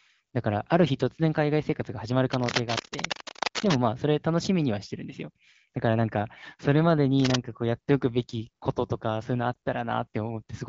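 Cable scratch noise runs from 2.32 to 3.78 s: a dense, uneven crackling and rustling sits over the speech for about a second and a half, roughly as loud as the speech itself. The likely cause is a worn cable, connector or control being moved, so its contact resistance jumps about rapidly and injects bursts of noise into the signal path for as long as it is disturbed.

A lost AMR speech frame follows at 9.54 to 9.56 s, heard as a brief dip or warble in the wideband speech. One 20 ms frame failed its check after a transmission error, so the decoder filled the gap by reusing the previous good pitch and vocal tract settings at reduced gain. Because only a single frame is missing, the speech falters for an instant rather than fading toward silence.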